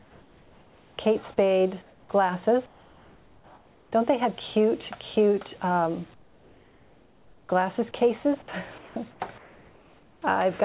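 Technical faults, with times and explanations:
0.00–0.98, 1.82–2.09, 2.66–3.92, 6.14–7.49, 8.78–8.96, 9.11–9.20 and 9.38–10.22 s: comfort noise in place of the background. Each gap's natural background becomes a flat, featureless hiss, about 1 to 6 dB quieter. This is likely discontinuous transmission, with the receiver synthesising the fill.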